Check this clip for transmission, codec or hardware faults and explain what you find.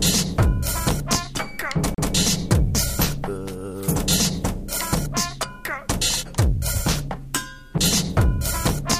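Two CD skips occur, at 1.94 to 1.98 s and at 7.78 s. Each time the laser jumped to another turn of the disc's spiral: a brief mute, roughly 40 ms and then only a few ms, and playback resumes from a different point rather than where a simple dropout would continue.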